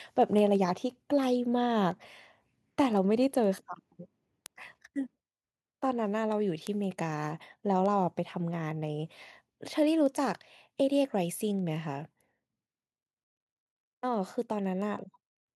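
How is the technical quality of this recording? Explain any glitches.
The recording has two technical faults: a steady train of clicks running almost the whole length of the speech, and two small sudden drops in level.

Word clock ticks run from 0.2 s to 15.5 s, about one every 0.15 s, roughly a hundred in all. The receiving device's clock is not locked to the sender's, with a mismatch of around 150 parts per million. Each time the two clocks slip by a sample, one sample is dropped or repeated. Each slip is heard as a sharp tick, and the ticks vary in strength. In the waveform each one is a short spike, and on a spectrogram it is a thin vertical line across all frequencies, repeating at even spacing.

Microphone volume stepped down at 1.02 s and again at 10.11 s. At each point the speech and the background noise both drop by about 2 dB at once, with no fade. The likely cause is the call software judging the input too hot and lowering the microphone's input gain in one step. 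The waveform envelope shows a small, clean drop at each of those moments. On a spectrogram, every frequency band dims slightly at the same instant, while the noise floor between phrases sits a little lower afterwards.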